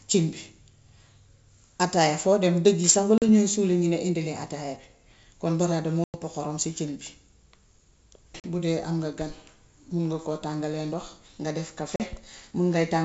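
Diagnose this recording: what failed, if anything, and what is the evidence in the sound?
The failure is at the network stage: packet loss on an ADPCM call, carried by G.722 wideband coding. Hard-edged silent holes open at 3.18 s, just before "ñuy suuli ñu", at 6.04 s, at 8.40 s, and at 11.96 s, right after "nga def". Three gaps last 40 ms, which fits a couple of lost packets. The one at 6.04 s lasts 100 ms. Afterwards the decoder's predictor and step size no longer match the sender's. Speech returns slightly distorted, then settles.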